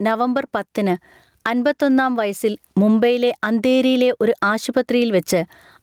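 Gain pumping runs throughout: the input gain is likely set far too high, so a fast limiter clamps down on each loud syllable, swinging the gain by around 15 dB.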